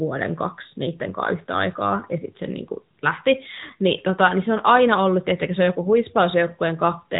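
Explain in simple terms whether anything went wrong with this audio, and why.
AMR narrowband mobile codec, throughout: the speech went through a mobile-phone codec that discards everything above 4 kHz and rebuilds it from a simplified model, sounding muffled and buzzy.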